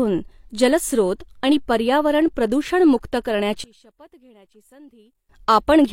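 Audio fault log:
3.64 to 5.29 s, one channel inverted: right after "जलस्रोत आणि पर्यावरण प्रदूषणमुक्त" the speech collapses to a faint residue, about 28 dB quieter. The likely cause is one stereo channel flipped in polarity, so the shared signal cancels when the channels combine.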